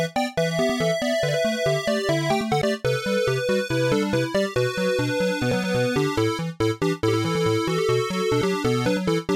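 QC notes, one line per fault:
2.62, 5.52 and 8.42 s, audio missing between chunks: about a tenth of a second skips every 2.9 s, likely from 3 s chunk handoffs; the waveform shows abrupt splices, the spectrogram vertical seams.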